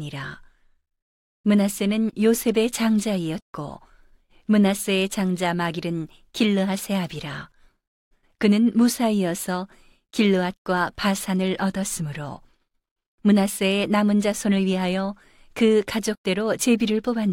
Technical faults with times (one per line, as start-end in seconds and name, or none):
none